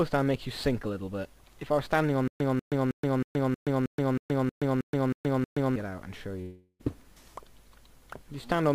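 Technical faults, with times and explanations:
2.28 to 5.76 s, stutter with silent gaps: the stream likely stalled and replayed its last fragment on each retry. A 192 ms burst repeats eleven times every 316 ms, with 124 ms of digital silence between, and the audio due in that span never plays.
6.41 to 6.81 s, long network dropout: incoming audio likely stopped arriving, so the receiver stretched the last sound into a fading buzz for about 380 ms, then about 30 ms of silence, before the audio resumes with that stretch missing.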